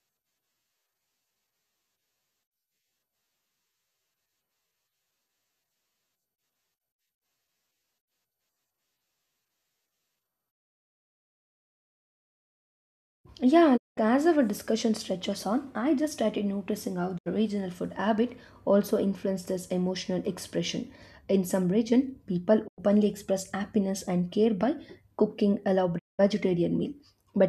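The speech falls abruptly silent four times, each hole entered through a fast fade of about 20 ms: at 13.76 to 13.99 s, just before "as our discussion stretches"; at 17.17 to 17.28 s, between "just started noticing how" and "regional food habit also"; at 22.66 to 22.80 s, between "some region people" and "express happiness and care"; and at 25.97 to 26.21 s. This is digital broadcast dropout. The receiver stopped getting usable frames and muted until valid ones returned. The lost stretches of roughly 72, 96 and 192 ms fit whole 24 ms frames being discarded, and that audio is gone.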